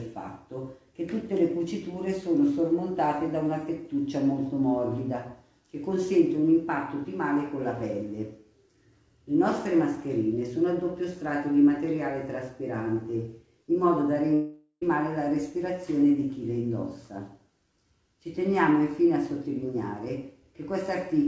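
The audio passes through a call path whose band stops at 8 kHz, consistent with G.722 wideband coding. From 14.34 to 14.83 s it breaks off in what is likely a long network dropout. For nearly half a second the receiver keeps extending the last sound as a decaying buzz or hiss, then holds silence for about 80 ms before the signal returns. Roughly 480 ms of the original material never reappears, so the audio resumes further along.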